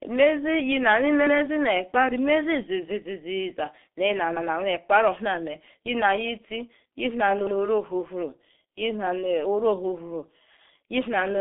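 Speech passed through the G.723.1 codec for its whole length: heavy damage leaves it muffled and hoarse with smeared consonants, consistent with a roughly 6 kbit/s rate. A spectrogram shows energy confined to about 200 Hz–3.6 kHz, with nothing above 3.7 kHz.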